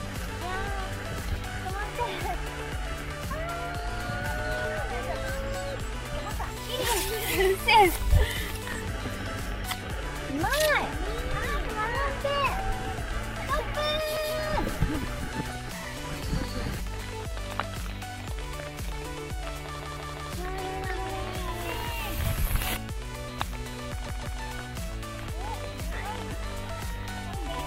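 Repeated buffer at 14.17 s, 19.80 s and 24.06 s: fresh audio arrived late, so the last 0.17 s block replayed once, three times and then twice, each a hard-edged stutter. The block length fits an 8192-sample buffer, and nothing seems skipped afterwards.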